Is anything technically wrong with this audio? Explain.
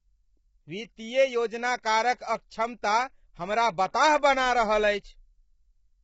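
Yes. Throughout the speech the sound is rough and grainy, with noise filling the gaps between voice harmonics and nothing above 7.7 kHz. This is heavy damage, most likely from low-delay AAC compression (AAC-ELD) at a rate that points to around 16 kbps. Its short frames of roughly 10 ms cannot resolve pitch harmonics finely, and at such a low rate too few bits remain to code them cleanly, so the voice sounds coarse and the top band is cut off.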